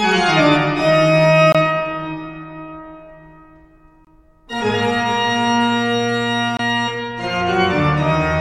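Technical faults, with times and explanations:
1.52–1.55 s, 4.05–4.07 s and 6.57–6.59 s: gap between chunks. The audio comes in 2.5-second pieces with 23 ms of silence at each join. Nothing is lost, but regular short holes interrupt the sound.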